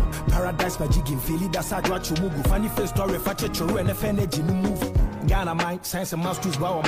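No technical faults can be heard anywhere in this audio. Nothing in it calls for a timestamp or a note on how it went wrong.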